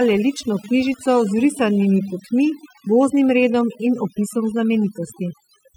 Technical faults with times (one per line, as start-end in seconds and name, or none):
0.00-5.77 overdone noise removal